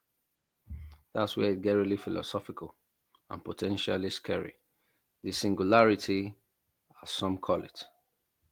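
No technical faults are audible.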